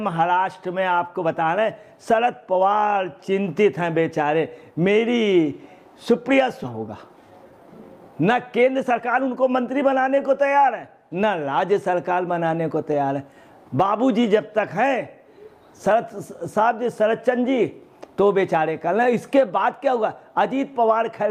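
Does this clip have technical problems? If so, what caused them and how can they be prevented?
Yes. A skip ahead occurs at 6.63 to 6.65 s. About 0.7 s of audio was dropped, and the two sides join with no gap. Larger jitter buffers and steadier network paths prevent it.

Jitter buffer speed-up runs from 6.73 to 8.12 s at 112% and from 8.58 to 9.92 s at 110%. Short pitch periods were cut repeatedly, so the audio sounds hurried. Smoother packet delivery prevents the overfilled buffer.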